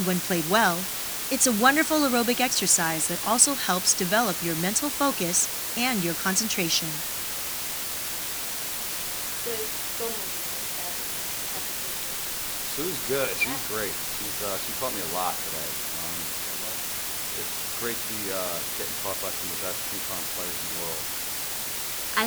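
Low bit depth with dither runs through the whole clip, from start to finish. The audio has been reduced to about 5 bits, with a small random signal added before each sample was rounded to the nearest available level. That dither turns what would have been harsh, signal-dependent distortion into steady white noise. At this depth the hiss is very strong, nearly as loud as the sound itself, forming a constant, even wash beneath everything without any gritty breakup.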